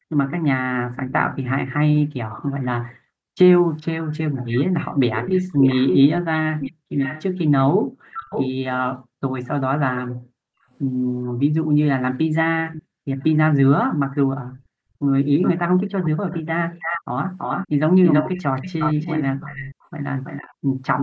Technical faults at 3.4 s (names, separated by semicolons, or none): background gated by the echo canceller